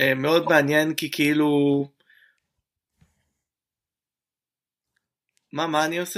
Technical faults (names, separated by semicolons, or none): corrupt frame decoded